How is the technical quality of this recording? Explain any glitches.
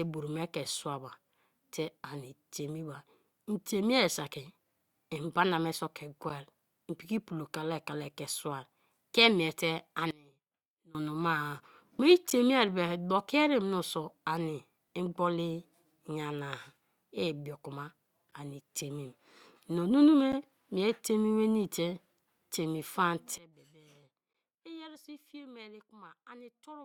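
The recording has two kinds of fault: brief dropouts at stream segment boundaries, and abrupt level drops.

Gaps between stream segments occur at 6.29, 12.30, 18.31, 20.32 and 24.33 s. The first comes just before "i'm piki". Each is a hard-edged silence of roughly 8 to 13 ms. They fall on 2-second boundaries. Adjacent segments' timestamps don't quite meet, and the player fills the space with silence. No sound is lost.

A sudden gain jump hits at 10.11 s. Speech and background noise drop together by about 24 dB, then snap back at 10.95 s. A second drop of about 23 dB starts at 23.38 s and lasts to the end. The likely cause is a digital gain change applied without a ramp.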